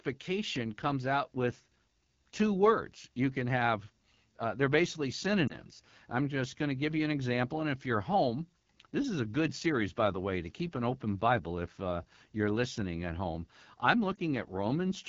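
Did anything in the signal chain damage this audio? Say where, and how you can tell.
Yes. At the codec stage, a rough, raspy texture throughout the speech points to AMR wideband (HD Voice) coding at a low rate, consistent with 8.85 kbit/s.

On the network side, lost AMR speech frames cause brief warbling dips at 5.48–5.59 s and 14.16–14.20 s. Each fits one 20 ms frame, concealed by reusing earlier pitch and vocal tract settings at reduced gain.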